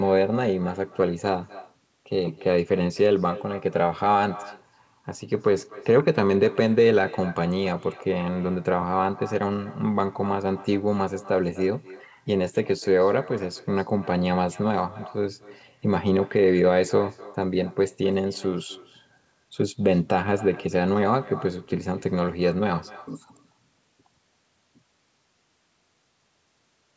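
From start to finish the speech carries echo with no canceller: the far end's loudspeaker output is picked up by its microphone and returned, so every phrase is trailed, roughly a third of a second later, by a copy about 20 dB quieter that sounds thin. On a spectrogram each speech burst has a faint duplicate shifted right by that gap, confined like the speech to the band below 8 kHz, which fits a wideband call codec.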